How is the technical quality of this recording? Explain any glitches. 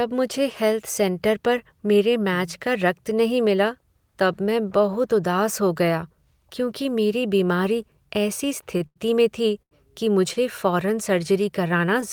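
The speech has four brief timing glitches, all short stalls from a late packet. They fall at 8.77–8.82 s, 8.86–8.98 s (before "में थी कि"), 9.62–9.73 s (after "में थी") and 10.33–10.38 s (after "में थी कि"). Each time a packet arrived late and the jitter buffer emptied. The receiver held the last sound for 28, 94, 90 and 29 ms, then resumed. Nothing is lost. Sounds just drag briefly.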